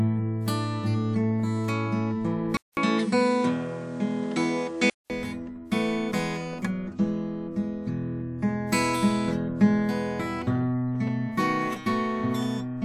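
A music recording whose sound changes abruptly between 2.57 and 5.10 s. A gap of about 200 ms opens at 2.57 s, after which the top end stops at around 10.5 kHz, the level shifts by roughly 5 dB, and a new noise floor appears, sitting some 35 dB below the music. At 5.10 s the full bandwidth returns. The likely cause is the input switched to a poorer device, with its narrower band, different gain and own background noise.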